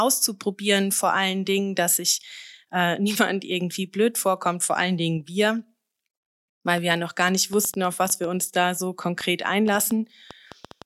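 A speech recording where, from 6.78 s to 10.83 s, an uneven ticking cuts across the sound: a train of clicks, around twenty of them at about 4.7 per second, irregularly spaced and peaking roughly 5 dB above the speech, likely from electrical interference or a faulty connection or power supply.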